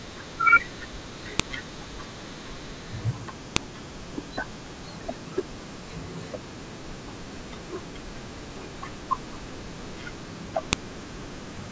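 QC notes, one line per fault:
1.40 s, 3.56 s and 10.73 s, file header played as audio: a sharp, loud click at each of these points, where a new chunk begins and its header bytes got played as samples instead of being stripped. That's why each snap cuts straight across the speech.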